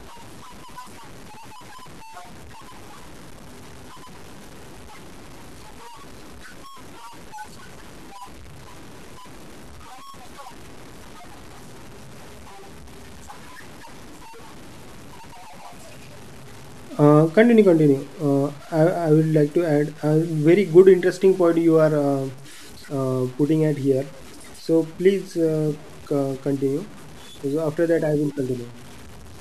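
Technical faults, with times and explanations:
Throughout: low bit depth without dither. The speech carries a grainy, rasping distortion that rises and falls with the voice. Quiet stretches sound gritty, and the softest tails break up and sputter into silence. The cause is likely truncation to about 7 bits with no dither. Each sample snaps down to a coarse step, so the error tracks the signal instead of forming steady hiss. It sits roughly 25 dB below the speech.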